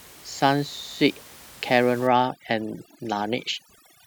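Speech clip with overdone noise removal from 2.07 s to the end: background drops and breaks up into twinkling specks, unlike steady room noise beneath it earlier.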